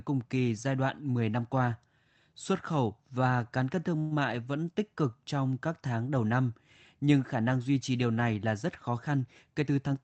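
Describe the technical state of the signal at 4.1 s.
At 4.1 s a short buzzy hiss fills 3.99 to 4.13 s, continuing the preceding sound before speech resumes intact. This is likely a call audio freeze: delayed packets emptied the jitter buffer and 116 ms was filled in.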